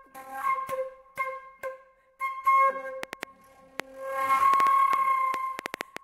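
Likely interference from nearby equipment or a struggling interface produces a train of clicks from 3.03 to 5.98 s: around fifteen sharp, similar pops at about 4.4 per second, unevenly spaced and standing well above the sound.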